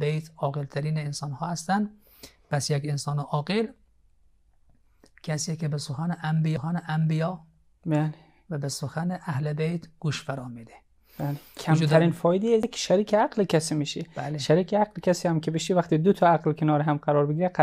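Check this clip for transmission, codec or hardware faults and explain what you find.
Two CD skips are present, at 6.56 s and 12.63 s. In each, a knock or disc flaw threw the laser onto another turn of the spiral track. The player muted for a few milliseconds and resumed from a different point. Each is heard as a brief tick followed by an abrupt discontinuity in the sound. On a waveform, a short flat gap appears with mismatched material on either side. A spectrogram shows a thin vertical broadband line at each time.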